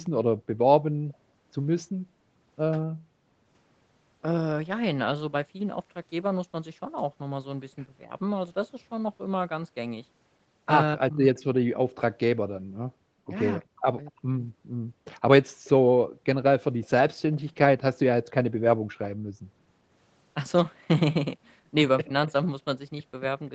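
From 0.04 to 1.17 s a faint, delayed copy of the speech trails about 248 ms behind it, roughly 35 dB below the main voice. This is an echo leak: the far end likely played the call over a loudspeaker, and its echo canceller let some of the microphone pickup return.

Between 10.95 and 11.37 s the voice drops sharply, by as much as about 40 dB over roughly 400 ms. This is speech suppressed in double talk, likely because both sides spoke at once and the echo canceller turned down the talker along with the echo.

A second, very brief echo leak appears from 13.61 to 13.65 s, again about 248 ms late and about 40 dB down. From 13.7 to 14.7 s the speech is then suppressed in double talk again, dipping by up to about 40 dB over about half a second.

At 22.06 to 22.29 s a milder speech suppression in double talk takes out about 70 ms in total, with the level dropping about 15 dB, heard as a short dip rather than a full cut.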